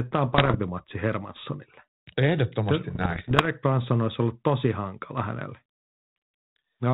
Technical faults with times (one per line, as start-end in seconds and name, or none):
0.32-0.55 bit errors on an ADPCM link
2.90-3.47 bit errors on an ADPCM link